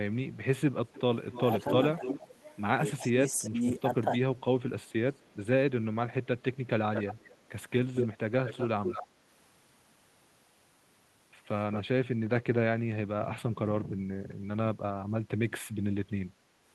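An echo leak starts at 0.87 s and runs to 2.28 s. A delayed copy of the speech returns 284 ms late, only about 5 dB below it. It recurs at 2.93 to 3.80 s and 4.88 to 5.35 s, at the same lag but fainter. The likely cause is a loudspeaker echo canceller letting residue through.

From 3.01 to 4.11 s, speech is suppressed in double talk. The talker dips by about 15 dB in pieces, roughly half a second in total. The canceller likely could not tell speech from echo, so it turned both down.

The echo leak returns at 6.94 to 7.43 s, 7.96 to 9.07 s and 11.72 to 11.83 s, now 226 ms late. The latest repeats are about 5 to 10 dB below the speech. The Opus call path tops out near 12 kHz.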